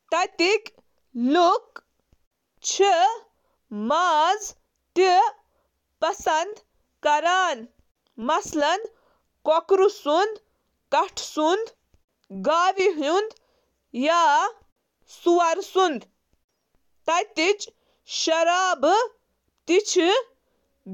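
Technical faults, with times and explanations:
No technical faults can be heard anywhere in this speech recording; the signal stays continuous and steady throughout.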